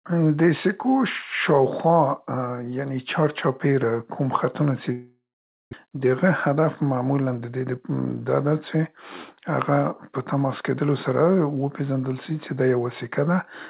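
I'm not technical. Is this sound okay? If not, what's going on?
No, there are two problems, both in the middle of the clip.

From 4.92 to 5.74 s there's a long network dropout, most likely. The speech stops arriving, and instead of just going quiet the receiver stretches the last bit of sound into a fading buzz or hiss before falling silent for about half a second. When the speech returns, the missing half-second is simply gone, not caught up later.

Then, from 5.85 to 8.84 s, you get a jitter buffer speed-up. The receiver was holding a backlog of audio, so it quietly snips out tiny slivers to catch up, roughly a fifth of a second in all. The speech plays about 7% faster but keeps its normal pitch, so it just sounds a bit hurried.

The slightly muffled, phone-like tone throughout is just the call line, which carries nothing above 4 kHz.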